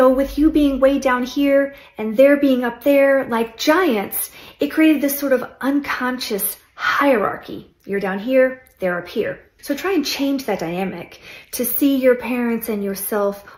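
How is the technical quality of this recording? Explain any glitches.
The technical quality of this recording holds up, and there are no glitches to explain.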